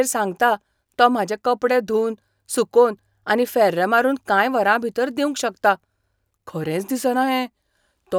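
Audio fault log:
No technical faults can be heard anywhere in the speech signal.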